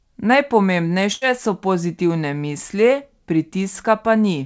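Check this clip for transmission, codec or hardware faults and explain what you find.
One transmission fault is present: a burst of packet loss from 1.13 to 1.24 s. Several consecutive packets failed to arrive in time. The receiver covered the hole for about 84 ms by extending the last decoded sound and fading it down, then resumed 90 ms further along. The result is a brief smeared buzz or dying hiss where the speech should continue, then an abrupt restart with a short stretch of speech missing. Separately, the call path leaves nothing above 8 kHz, which fits a wideband call codec such as G.722.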